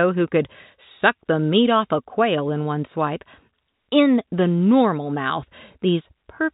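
Nothing stood out on listening to this telephone-band speech recording.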